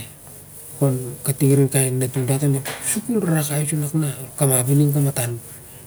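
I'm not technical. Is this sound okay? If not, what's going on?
Yes, this sound is okay, and there's nothing going on that needs fixing.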